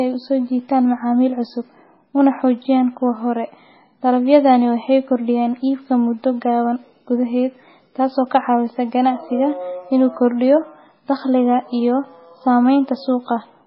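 Speech, with heavy MP3 compression damage throughout. Nothing remains above about 5.6 kHz, and the sound turns watery. That likely fits a very low bitrate near 16 kbps.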